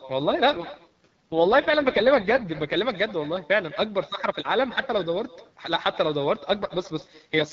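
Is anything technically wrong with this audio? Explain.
Yes, there are two faults.

Echo with no canceller runs throughout. The far end's loudspeaker feeds its microphone, so the speech returns after roughly a fifth of a second, about 18 dB quieter and thin.

An AMR rate drop occurs from 0.52 to 2.78 s and again from 6.62 to 7.52 s. The wideband speech turns rough and synthetic, which fits the codec falling from 12.65 to 6.6 kbit/s on a weak link.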